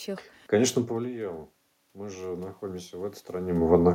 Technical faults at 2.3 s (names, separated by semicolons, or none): automatic gain rising